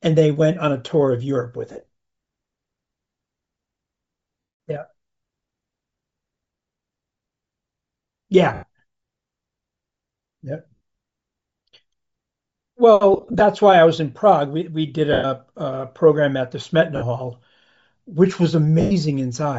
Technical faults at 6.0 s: Bluetooth LC3 compression

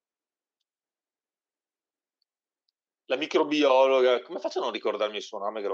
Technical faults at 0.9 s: none

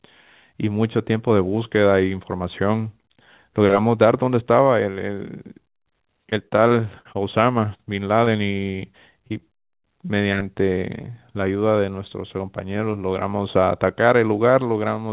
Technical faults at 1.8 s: none

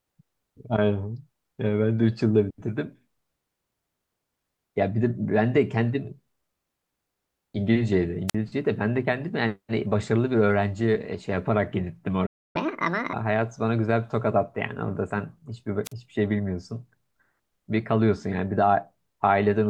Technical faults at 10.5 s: none

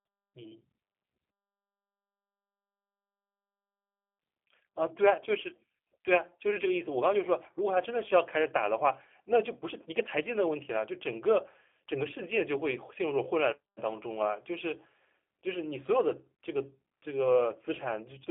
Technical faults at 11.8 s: G.729 codec

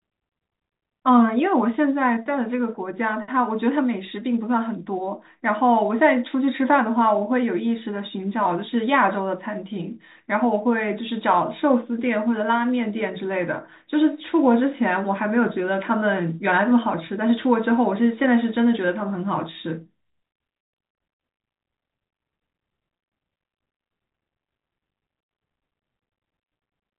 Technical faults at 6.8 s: none

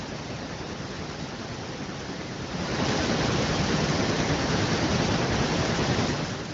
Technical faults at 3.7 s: none

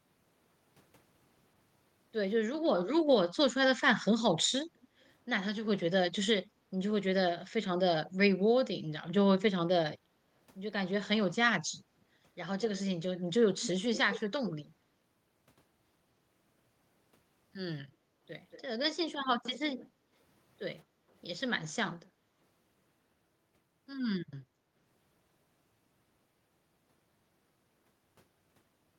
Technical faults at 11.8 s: none

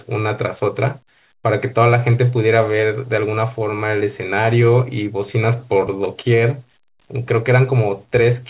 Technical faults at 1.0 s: none

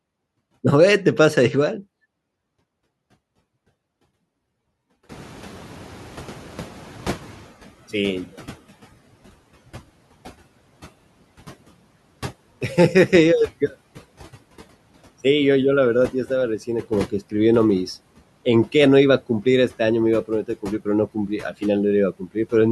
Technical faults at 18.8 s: none

